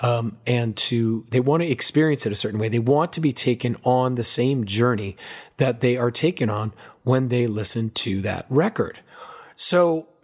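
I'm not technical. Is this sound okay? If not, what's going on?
Yes, nothing in this recording stood out as a problem on listening.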